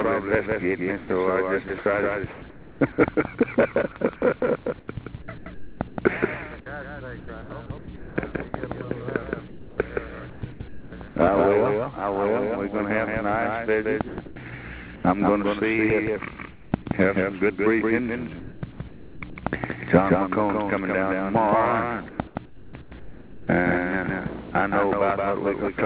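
Throughout, a second full-band copy trails about 150 ms behind, roughly 5 dB quieter. This doubled audio track likely comes from a second capture path.

From 0.98 to 2.8 s, 4.4 to 11.16 s, 14.08 to 15.04 s and 18.4 to 19.42 s, the sound is chopped by the voice detector. Quiet edges flicker into synthetic noise, likely from repeated gating.

At 16.52 to 16.72 s and 22.1 to 23.48 s, comfort noise replaces the background. It is steady and featureless, about 6 dB quieter in the first gap, likely because transmission paused.

From 22.82 to 22.92 s, sound is dropped by the voice detector. A faint passage gives way to noise, likely judged as background.

The narrowband call codec leaves nothing above 4 kHz.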